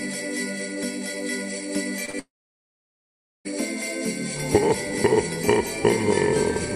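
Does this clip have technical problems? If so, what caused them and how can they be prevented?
Yes. Around 2.05 to 2.10 s and again 2.10 to 2.15 s, two bursts of short concealed packet loss, roughly 20 ms and 40 ms, arrived too late to decode. The receiver patched each gap by extending the preceding sound, leaving a brief smear or wobble. A jitter buffer with more headroom and forward error correction would absorb such small losses.

From 2.19 to 3.47 s, a long network dropout likely starved the receiver of packets for about 1.26 s. Concealment stretched the last sound into a fading tail, then about 1.2 s of silence followed before the sound resumed with that stretch missing. A more stable connection, such as a wired link or less congested network path, would prevent this.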